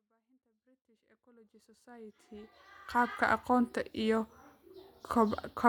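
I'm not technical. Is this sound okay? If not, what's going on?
Yes. It simply fades in gently over 3.4 seconds.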